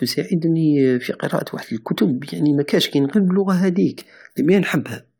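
A speech recording with nothing technically wrong with it.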